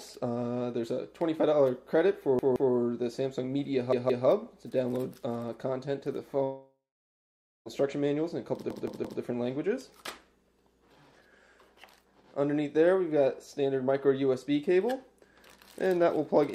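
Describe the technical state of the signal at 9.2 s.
A repeated buffer spans 8.70 to 9.22 s. New audio arrived late, so one 171 ms piece played three extra times. It sounds like a stutter with hard joins.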